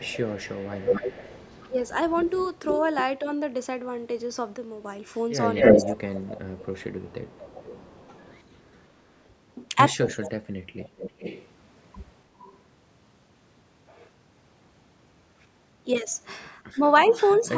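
From 0.0 to 2.82 s a second copy of the speech trails the original by 250 ms, roughly ten decibels quieter. This is likely echo leak: the far side's echo canceller let its loudspeaker's pickup through and sent it back.

At 4.57 to 4.85 s the level falls abruptly by 6 dB and then recovers. This is likely one channel dropping out, with only the surviving channel's share left in the mono sum.

From 5.55 to 11.48 s a loud echo sits only a little below the speech at a 322 ms delay, which is likely echo leak again. Within it, from 5.75 to 8.13 s, the speech dips in pieces totalling about a second and a half, at worst by roughly 25 dB. From 9.92 to 10.52 s it dips again, by as much as roughly 35 dB, over about half a second. Both dips are likely speech suppressed in double talk, where the canceller couldn't separate the talker from the returning echo and turned both down.

From 12.39 to 12.59 s there is a faint echo at 398 ms, likely another leak. 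A brief 6 dB channel drop comes at 15.99 to 16.07 s, likely one channel dropping out again. From 16.74 to 17.14 s there is a short double-talk dip of roughly 15 dB, likely suppression again, and it overlaps a 398 ms echo leak that runs from 16.85 to 17.49 s, likely at a moderate level.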